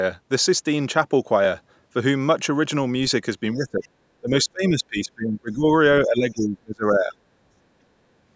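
At 3.53 and 3.84 s, and more audibly at 6.35 s, faint scraps of a second voice are heard, likely the other side's voice leaking through an incomplete echo cancellation rather than background talk. From 3.54 to 3.87 s, 4.21 to 5.66 s and 6.05 to 7.13 s the speech dips by up to about 30 dB, likely suppressed in double talk.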